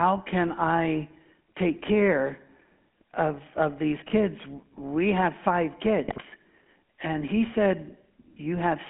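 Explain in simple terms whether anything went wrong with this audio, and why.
Yes, two things went wrong. The whole recording went through the GSM full-rate codec, an old mobile phone system. It rebuilds the voice from a rough model driven by buzzy pulses. That makes the speech sound gravelly and thin, with nothing kept above about 3.4 kHz.

There are also GSM bit errors, heard from 4.02 to 4.10 s and from 6.07 to 6.23 s. Bits were corrupted on the way to the decoder, which then rebuilt the sound wrongly. The voice breaks into brief squawks and gargling, worse in the second burst.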